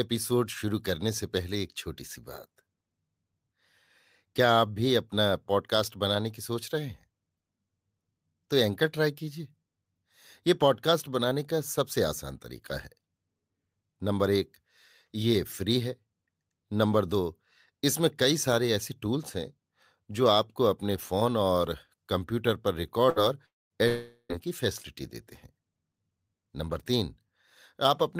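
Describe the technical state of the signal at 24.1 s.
At 24.1 s the signal sits inside a long network dropout running from 23.88 to 24.32 s. The likely cause is that the stream stopped arriving for a while, so the receiver had nothing to decode and about 0.42 s of the speech was lost for good. It filled roughly that much by stretching the last sound into a fading buzz or hiss, then left a short silence of about 60 ms before the audio resumed without the missing part.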